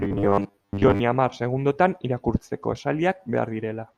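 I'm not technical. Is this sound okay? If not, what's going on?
No. From 0.01 to 1.0 s the speech turns into a rigid, metallic buzz pitched at 100 Hz, ending just before "hamar segundotan". This is robotic sound from repeated short buffers, likely from audio arriving too slowly and a 10 ms slice being replayed over most of that stretch.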